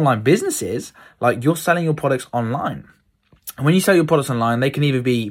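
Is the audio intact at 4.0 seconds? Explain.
No. At 4.0 seconds the speech carries sample clock jitter, present throughout the clip. The converter's timing wanders randomly by something like a microsecond or two, so steep parts of the waveform are sampled at slightly wrong values, leaving an error about 40 dB below the signal. It sounds like a faint hiss or roughness riding on loud, bright sounds. A spectrogram shows a diffuse noise haze that tracks high-frequency energy and disappears in pauses, while the waveform looks unchanged.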